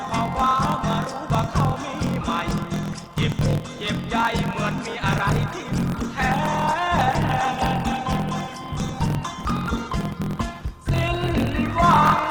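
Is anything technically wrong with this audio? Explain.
Yes, there are two problems.

A block size mismatch (truncated) runs the whole way through. One stage writes longer blocks than the next reads, which fits the reader taking 1024-sample blocks, so each block's tail gets dropped. You hear a 43.1 Hz buzz, and everything plays 1.12 times fast at roughly normal pitch.

From 5.10 s to the end, it sounds like an adaptive stream at a lower bitrate took over, consistent with a drop from 64 to 16 kbit/s Opus. The quality changes suddenly with no gap, and the codec artefacts get thicker.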